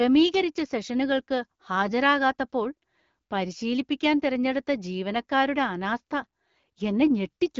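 A speech clip, carried through an AMR wideband (HD Voice) codec with only light coding texture and the usual top end out to about 7 kHz. The problem is at 0.34 s: a tiny, loud crack from an uninitialised buffer. A block got played before any audio was written into it, so whatever junk sat in memory came out as samples. It lasts well under a millisecond, about 0.67 ms, which fits a 32-sample block.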